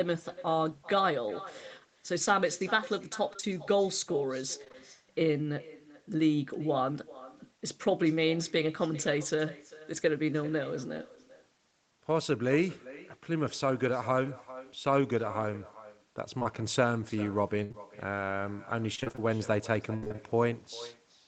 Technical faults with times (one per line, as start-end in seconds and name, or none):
0.00-21.27 echo with no canceller
3.33-3.55 repeated packet loss (robotic sound)
4.64-4.75 repeated packet loss (robotic sound)
16.39-16.47 short concealed packet loss
17.63-17.72 burst of packet loss
17.72-17.75 short concealed packet loss
18.95-20.20 repeated packet loss (robotic sound)